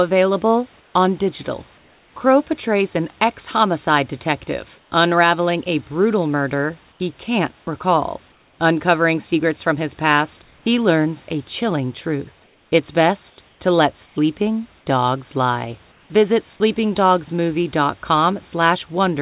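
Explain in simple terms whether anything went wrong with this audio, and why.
Comfort noise replaces the background at 0.80, 1.78, 4.78, 6.92, 8.32, 10.42, 12.44 to 14.16, and 15.92 seconds. In these pauses the real room hiss drops out and a smoother synthetic noise takes its place, quieter in most of them. The likely cause is the call's sender going silent between phrases and the receiver filling the gap.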